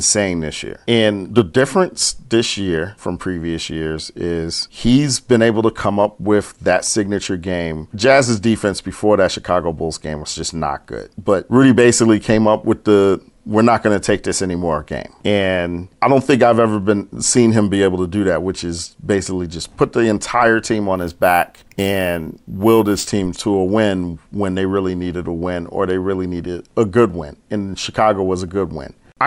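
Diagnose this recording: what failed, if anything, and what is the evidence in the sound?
A sample-rate conversion stage failed, producing imaging from sample-and-hold upsampling between 20.96 and 23.07 s. The speech picks up a bright metallic fizz that rises and falls with the speech level, and its lowest component moves opposite to the pitch. Each sample was simply repeated, with no smoothing filter, which fits a 24 kHz to 48 kHz conversion. On a spectrogram, a mirrored copy of the speech spectrum fills 12 to 24 kHz at about 24 dB below the signal. Zoomed in, the waveform shows two-sample staircase steps.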